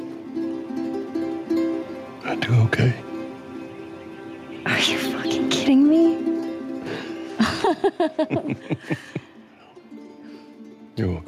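Gain pumping runs throughout: the level ducks around 15 dB under loud sounds, likely from excessive gain hitting a fast limiter, leaving a flattened, breathing waveform envelope.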